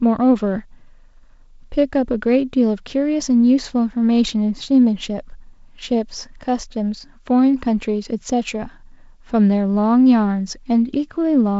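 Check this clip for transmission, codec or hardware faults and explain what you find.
Nothing in the recording points to a fault. The speech has the sound of G.722 wideband telephone coding, with a faint coder hiss and slight graininess that fits the 48 kbit/s mode, and nothing is heard above about 7.7 kHz.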